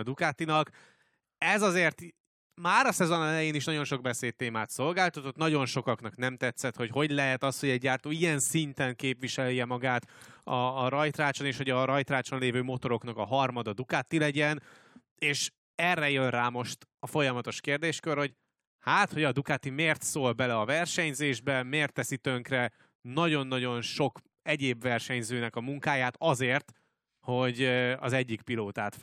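From 0.13 s to the end, the speech carries clock slip clicks: single-sample jumps roughly every 50 ms, about twenty a second, forming a faint regular rattle that is clearest on loud passages and absent in pauses. The likely cause is two unsynchronised clocks differing by around 400 ppm.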